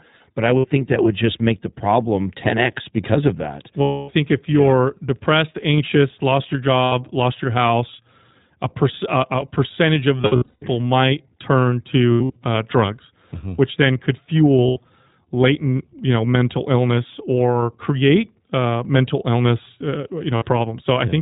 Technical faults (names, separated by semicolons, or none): iLBC codec; lost iLBC frames